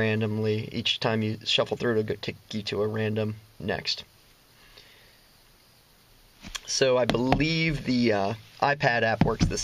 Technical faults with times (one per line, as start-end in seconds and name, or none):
3.60 damaged data in a compressed stream
6.48 damaged data in a compressed stream